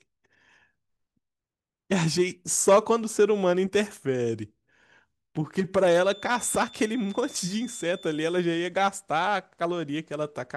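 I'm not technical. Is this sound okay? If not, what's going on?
No. There is a feedback whistle from 5.82 to 8.52 seconds: a thin, steady high tone at about 3.5 kHz sitting well below the speech and swelling and fading slowly in loudness. The likely cause is sound from a loudspeaker leaking back into the microphone, with the system held just at the edge of feedback, so that one pitch keeps ringing quietly instead of building into a loud squeal.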